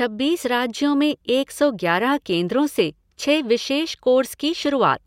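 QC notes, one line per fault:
No faults were heard anywhere in this speech clip. There is nothing to log against any time.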